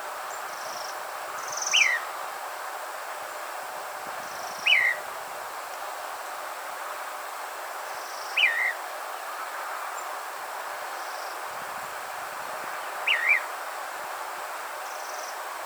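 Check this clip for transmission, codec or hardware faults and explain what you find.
Nothing stood out on listening to the clip.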